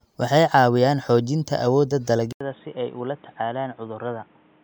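At 2.33 s the speech drops out for about 80 ms. When it returns, it sounds dull and boxy. Nothing comes through above 3.8 kHz, so the crisp consonant detail is gone. The level falls by a few decibels. A new background noise sits roughly 30 dB below the speech. This lasts to the end of the clip. The likely cause is an input switched to a poorer device mid-recording, with a narrower band and its own noise floor.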